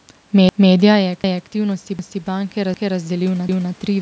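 A stutter first appears at 0.49 s. A quarter-second of speech plays a second time before the sound moves on, and the same hiccup recurs at 1.24, 1.99, 2.74 and 3.49 s, each repeat running 0.25 s. This is overlapping chunks. The audio was handled in half-second blocks, and each new block began a quarter-second before the previous one had finished. The overlap at every join was played twice, giving a regular, mechanical jolt every 0.75 s.

From 0.96 s to the end, the level swells gradually, with the room noise rising along with the speech rather than the voice alone getting louder. This is automatic gain rising. Around 1.0 s the talker moved away from the microphone, dropping the input by about 11 dB. The gain control responded by slowly turning itself up to compensate, lifting the background along with the voice over the remaining three seconds. The call's microphone processing also leaves nothing above 8 kHz.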